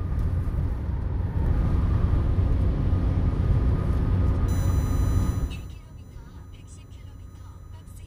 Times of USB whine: 4.48-8.06

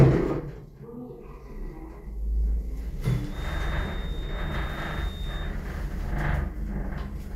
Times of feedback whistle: 3.26-5.56

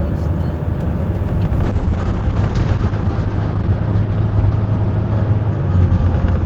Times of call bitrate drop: 1.64-6.45

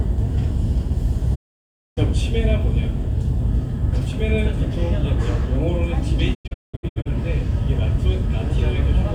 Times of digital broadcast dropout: 1.34-1.99, 6.33-7.07

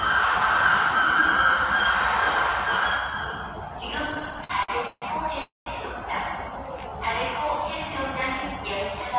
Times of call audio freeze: 5.42-5.68

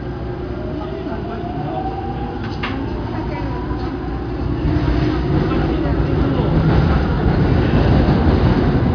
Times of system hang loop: none

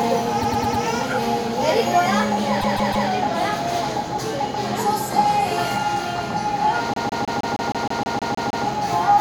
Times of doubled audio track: none

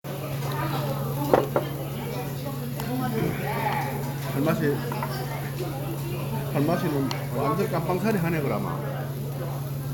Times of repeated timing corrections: none

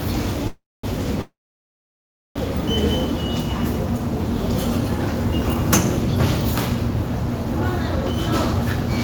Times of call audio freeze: 0.47-0.85, 1.21-2.37

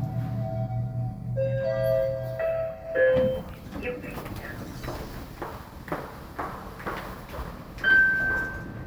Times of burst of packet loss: none

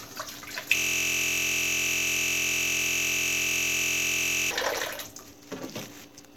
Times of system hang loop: 0.77-4.51

